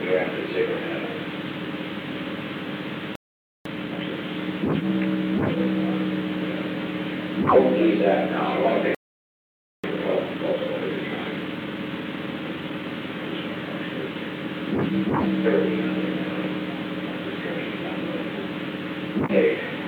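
A playback stall at 3.15 s cuts the sound off mid-flow for about half a second, until 3.65 s. Time-compressed catch-up follows from 3.65 to 4.13 s, where the sound runs at double speed without any rise in pitch, and small cross-faded pieces are dropped. A second playback stall silences the sound from 8.95 to 9.84 s, roughly 0.89 s, likely because the player ran short of data or its thread was blocked. Its catch-up runs from 9.84 to 12.84 s at 1.15 times speed, more gently hurried than before but with the same steady pitch as the backlog is trimmed away.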